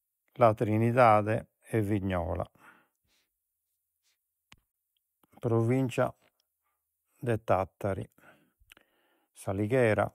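At 8.02 s a corrupt frame was decoded: flipped bits in a couple of compressed frames were played anyway, so misread gains and codes put energy at the wrong frequencies. The speech gets a brief, faint glitch, peaking at about -40 dBFS.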